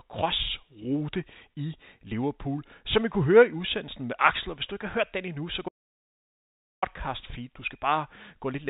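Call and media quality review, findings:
Audio dropout to silence, 5.69 s to 6.82 s: speech cuts out for about 1.14 s into silence, no room tone. Likely input loss upstream of the encoder (link or device drop, or mute) while writing continued; the narrowband telephone band of the G.711 path is heard either side.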